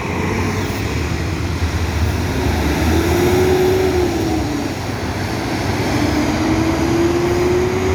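Nothing stood out as a technical fault on listening to these sounds.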